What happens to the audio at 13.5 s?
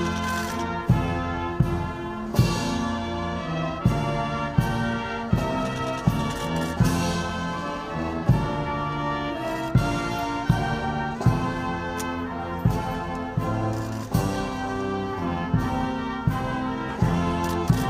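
Nothing goes wrong at 13.5 s; the audio plays through that moment intact, with no dropout, click or other fault.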